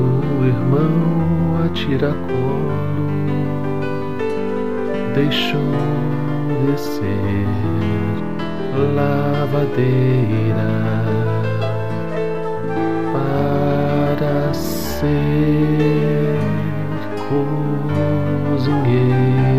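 No technical faults can be heard anywhere in the audio.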